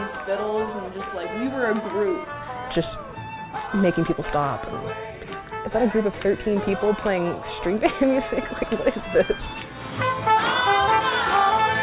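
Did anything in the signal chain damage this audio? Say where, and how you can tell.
No, nothing in the signal chain damaged this audio; the band stops at 4 kHz, which fits a narrowband G.711 mu-law call path working as it should.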